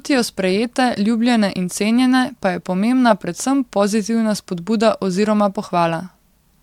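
Nothing in this speech recording stands out as a technical fault, so there's nothing to flag anywhere along it.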